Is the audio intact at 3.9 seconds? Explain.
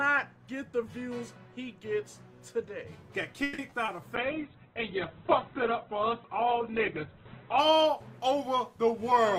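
No, a short concealed packet loss spans 3.86 to 4.02 s: about 20 ms of audio never arrived, so the receiver extended the preceding sound, leaving a brief smear.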